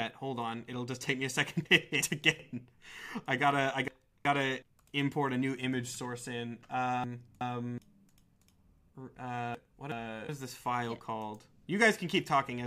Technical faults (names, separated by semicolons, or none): frames out of order